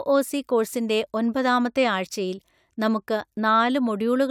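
No technical faults can be heard anywhere in the recording.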